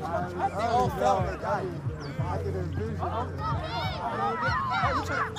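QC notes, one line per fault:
No faults found in this audio.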